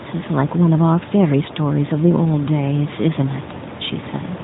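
No technical fault can be heard: the speech comes through an AMR narrowband mobile codec that passes nothing above about 3.8 kHz and leaves only light coding texture, with room noise sitting about 16 dB below the voice.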